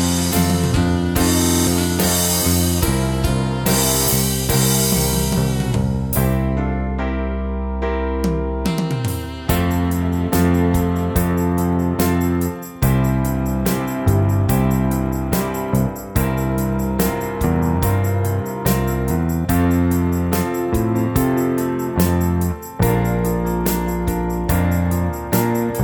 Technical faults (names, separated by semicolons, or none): system hang loop